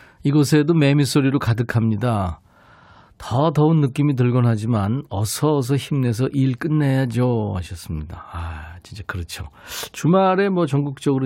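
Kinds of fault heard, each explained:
No technical faults are audible.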